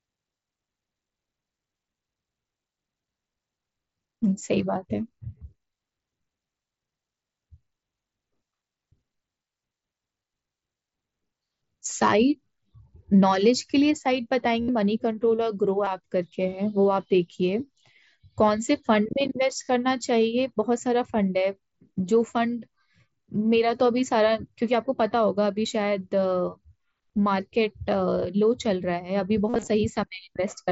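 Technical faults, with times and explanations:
5.39–5.41 s, 14.61–14.68 s, 15.85 s, 19.64–19.68 s: concealed Bluetooth headset packet loss. Lost headset packets are filled by repeating recent waveform, so gaps of roughly 15 to 70 ms become a buzzy held tone. The waveform shows short periodic copies at steady level, and the spectrogram shows flat horizontal harmonic stripes ending in a small warble.
29.48–29.68 s: concealed Bluetooth headset packet loss. Repeated losses over about 195 ms, in runs up to 45 ms, give a stuttering buzz. The spectrogram shows broken stretches of frozen harmonics interleaved with real audio.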